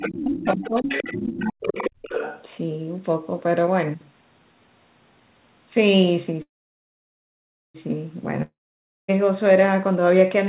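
This speech clip carries four kinds of call fault. An echo canceller that likely left residual loudspeaker signal lets the other side's voice leak through, faintly from 0.00 to 0.06 s at about 15 dB below the talker, then more strongly from 0.34 to 2.43 s at about 10 dB below, as a second voice underneath. During that overlap the canceller likely could not separate near talker from echo, so speech is suppressed in double talk: from 0.06 to 0.89 s the voice dips by up to about 20 dB over roughly 0.7 s, and from 1.16 to 1.77 s it sinks by up to about 35 dB for about half a second, sounding ducked. Held-up packets likely drained the jitter buffer, causing a call audio freeze from 6.42 to 7.77 s. The last sound is stretched into a fading buzz and then about 1.27 s of silence, before the audio resumes exactly where it stopped with nothing lost, only delayed by about 1.3 s. A long network dropout, likely lost packets, follows from 8.43 to 9.18 s. 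A brief fading fill gives way to about 0.55 s of silence, and roughly 0.66 s of speech never returns, so the audio picks up further along. All of this sits within the narrow telephone band of the G.711 path, which stops at 4 kHz.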